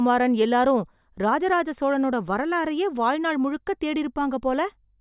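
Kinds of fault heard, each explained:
No technical faults can be heard in this speech recording.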